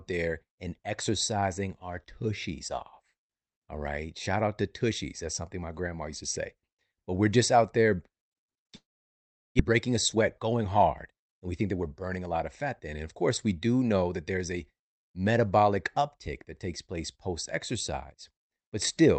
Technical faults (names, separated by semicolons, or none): long network dropout; jitter buffer speed-up